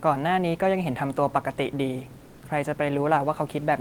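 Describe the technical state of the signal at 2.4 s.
At 2.4 s the sender has most likely stopped transmitting during a pause in the speech, the discontinuous transmission that Opus DTX uses, and the receiver is generating comfort noise in place of the background from 2.29 to 2.41 s, about 120 ms. The room noise, normally about 33 dB below the speech, is swapped for a flat, featureless synthetic noise about 2 dB quieter than the real background, which sits around 26 dB below the loud parts.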